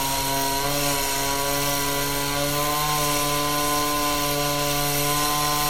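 From start to finish, nothing reaches above about 16.6 kHz, and the swirly smearing of heavy MP3 coding is there throughout. It's likely low-bitrate audio saved at a high bitrate: a file that fits a 64 kbit/s MP3 was re-saved around 320 kbit/s, which couldn't bring back what was lost.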